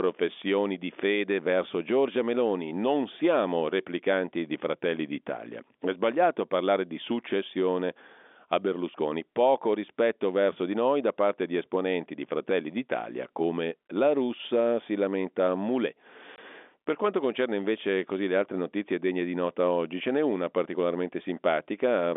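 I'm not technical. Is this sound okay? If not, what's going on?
No. At 16.36 s the speech drops out for a split second, about 20 ms. This is packet loss filled with silence: one chunk of the call's audio never arrived, and the receiver played nothing in its place, so the gap starts and stops abruptly. The narrow, phone-like sound comes from ordinary G.711 telephone coding.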